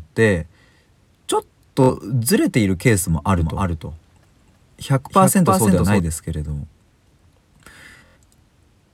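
At 1.84 to 1.90 s a Bluetooth stutter replays a short slice while about 46 ms of data is missing, heard as a brief buzz and seen as a repeating waveform pattern.

From 3.38 to 6.00 s a doubled audio track appears, likely a second capture path. A full-band copy roughly 300 ms late and about 5 dB quieter starts and stops abruptly, showing as a dry, time-shifted duplicate of the spectrogram.

From 7.92 to 8.17 s a second Bluetooth stutter scatters gaps over about 230 ms, with the longest run near 93 ms. It sounds like a machine-gun repeat, visible as tiled copies of the same spectral slice.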